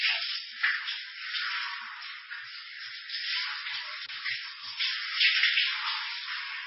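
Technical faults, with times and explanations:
Throughout, MP3 compression artefacts. Nothing is heard above 5.6 kHz, so the treble is gone and the sound is dull and boxed in. The damage is heavy. Quiet detail bubbles and swirls, dropping in and out from moment to moment. Sharp onsets smear. The likely cause is an MP3 encoder starved of bits, consistent with a rate near 15 kbps. It cuts the top band at a fixed point and discards weak frequency lines, leaving this watery texture.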